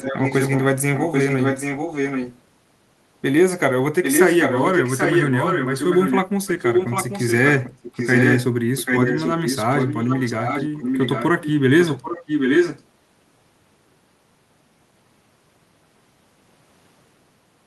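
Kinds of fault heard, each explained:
echo leak: A repeat of the speech trails it by about 0.79 s, close to or equal in level, from the start to about 12.8 s, likely a far-end loudspeaker's echo canceller letting its pickup return. Unlike reverb, it's a delayed copy, not a smeared tail.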